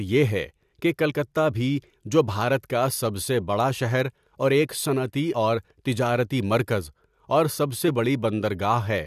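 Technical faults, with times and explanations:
1.09–1.11 s, 5.32 s and 7.87 s: damaged data in a compressed stream. Each spot is a brief glitch cutting into the speech, where corrupted bytes in the encoded file make the decoder misread a frame, lose sync and hunt for the next valid header.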